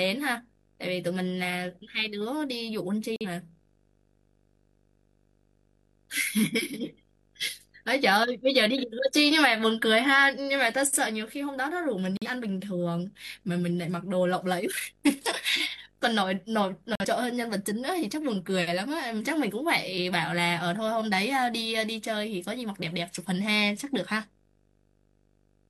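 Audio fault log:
throughout: video or display buzz, a 50 Hz field-rate buzz with hash above it and a 15.6 kHz line tone, roughly 30 dB below the speech.
3.16–3.26 s, 12.17–12.28 s, 16.95–17.05 s: corrupt frame muted, abrupt silent holes of about 0.1 s each. The decoder rejected damaged frames and the player filled them with silence, so timing stays intact.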